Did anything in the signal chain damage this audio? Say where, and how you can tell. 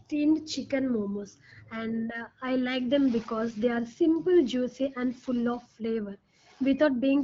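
No, nothing in the chain damaged this speech: it arrives through the AMR wideband (HD Voice) codec at 12.65 kbit/s, which holds the speech clear with only the light coding texture that rate leaves, and no stage adds anything further.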